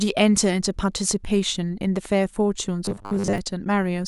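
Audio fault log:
2.85–3.38 s: robotic sound from repeated short buffers. The speech becomes a hard, mechanical buzz fixed at 100 Hz that loosely follows the words. Most of this stretch sounds replaced. The likely cause is one 10 ms slice replayed while fresh audio arrived late.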